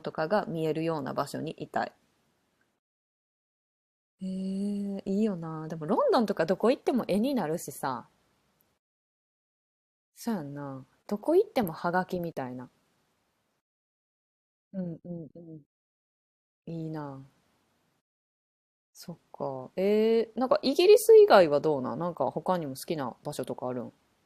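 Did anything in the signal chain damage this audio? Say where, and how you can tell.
No, nothing in the chain has audibly damaged this speech recording: there are no dropouts, level jumps, distortion or timing disturbances to point to at any stage.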